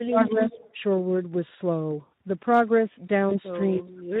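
Throughout the speech, the Speex codec damage is plainly audible: a hoarse, noisy grain, which fits a low-quality setting around 11 kbps. On a spectrogram, the harmonics look smeared and grainy, and any band above 4 kHz shows only diffuse noise rather than clear structure.

From 0.04 to 0.61 s, the speech dips and thins in pieces, totalling roughly 0.4 s, with the deepest drop about 25 dB. This is likely speech suppressed in double talk, as the echo canceller ducked the talker while the far side spoke. The waveform shows sudden notches in the envelope, and the spectrogram shows the upper frequencies vanishing during them.

Overlapping this, from 0.17 to 0.71 s, a copy of the voice trails about 0.3 s behind at about 10 dB below the speech. This is likely an echo leak from a loudspeaker-side canceller. On a spectrogram, it appears as a faint, delayed repeat of the voice's patterns.

From 3.29 to 3.39 s, VoIP packet loss concealed by the speech codec produces a brief stretched sound that fades, with weak, distorted audio for a while afterwards. 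This fits a single lost 20 ms frame. The spectrogram shows frozen, repeating harmonics decaying in level.

From 3.77 s to the end, speech suppressed in double talk returns, cutting the voice by up to about 35 dB over roughly 0.4 s. The waveform shows the envelope collapsing almost to silence.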